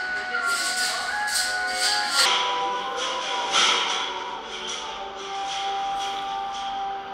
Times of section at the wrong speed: 2.25-7.14

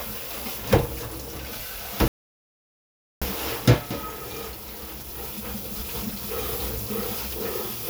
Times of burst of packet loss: none

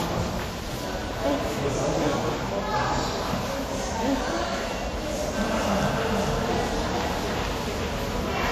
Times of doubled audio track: 5.35-8.51

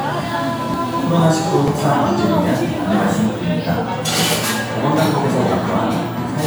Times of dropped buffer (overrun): 0.74, 1.68

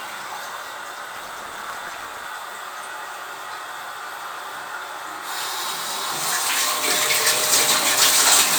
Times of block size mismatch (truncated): 1.15-2.26

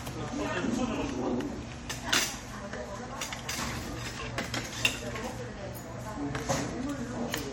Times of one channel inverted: none

